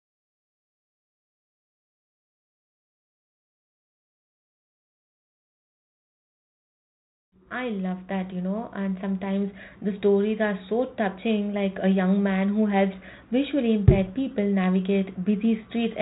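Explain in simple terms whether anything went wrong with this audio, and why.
Nothing went wrong with this speech recording, because no fault can be heard anywhere in it.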